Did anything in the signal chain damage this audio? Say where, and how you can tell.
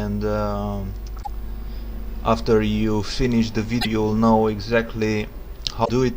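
Yes, damaged data in the compressed stream: 80 ms glitches at 1.19, 3.78 and 5.81 s, where corrupt bytes knock the decoder out of frame sync.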